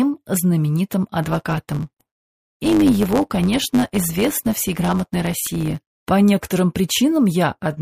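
From 1.22 s to 5.92 s, a block size mismatch (truncated) sets in: one stage hands over longer blocks than the next reads, which fits 512-sample blocks, and each block's tail is discarded. The result is a 100 Hz buzz while the audio runs about 1.07 times fast with its timbre unchanged.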